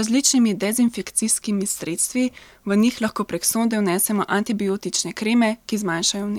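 No audible technical faults occur anywhere in this recording.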